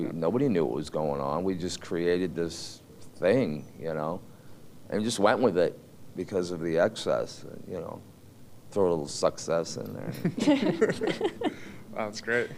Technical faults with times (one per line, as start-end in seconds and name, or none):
none